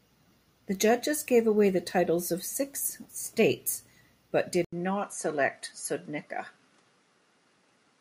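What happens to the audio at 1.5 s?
At 1.5 s the speech carries on intact, with no dropout, click, distortion or other fault at that moment.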